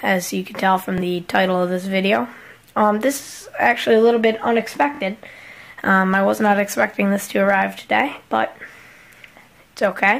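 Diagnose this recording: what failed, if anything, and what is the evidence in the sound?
Bluetooth stutter on the wireless link. There's a short repeat at 0.98 to 1.01 s and a longer machine-gun stutter at 4.95 to 5.01 s. The receiver ran dry and kept replaying its last slice of audio until fresh data turned up. The gaps work out to about 23 ms and 46 ms, which fits one and then two dropped packets. Afterwards the audio picks up further along, as if it had kept playing.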